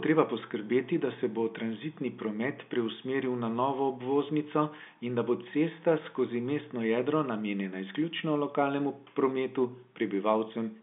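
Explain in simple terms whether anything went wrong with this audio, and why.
Nothing stood out on listening; the speech sounds like an ordinary phone call, with the narrower, slightly boxy tone that telephone lines normally have.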